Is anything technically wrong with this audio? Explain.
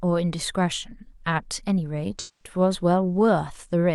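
Yes. From 2.19 to 2.55 s, AAC frame loss with concealment: roughly 213 ms of frames went missing, fitting about five AAC frames, and the decoder rebuilt the speech from the last good spectrum, leaving a smeared, noisy patch.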